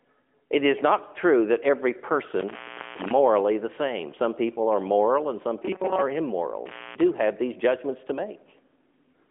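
From 2.39 to 3.11 s, just after "not true that every", an intermittent contact breaks the signal. A loose plug or cable opens for about 0.4 s, so the sound drops out with crackle at both edges and only faint hiss remains until "the same" returns.

From 5.63 to 6.02 s, after "are moral and some", the sound turns into a rigid metallic buzz at 188 Hz, likely from robotic sound from repeated short buffers. Roughly a 5 ms slice is looped while most of the real audio is skipped.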